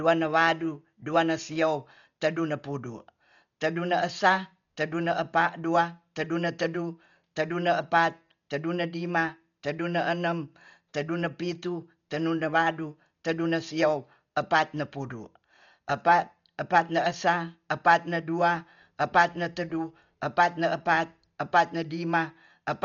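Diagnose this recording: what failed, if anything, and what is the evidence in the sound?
The failure is at the codec stage. Across the whole speech clip the band stops near 7 kHz, and the sound is dull with rough, fluttering noise around tonal parts. This points to likely Dolby Digital compression at a very low bitrate, around 40 kbps, narrowing bandwidth and dither-filling starved frequency lines.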